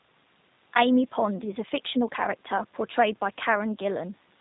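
Throughout the speech, G.729 codec coding is plainly audible, in a form consistent with an 8 kbit/s VoIP stream. Each 10 ms frame is rebuilt from a vocal tract filter, pitch prediction and sparse pulses. The result sounds slightly rough and synthetic, and nothing passes above 4 kHz.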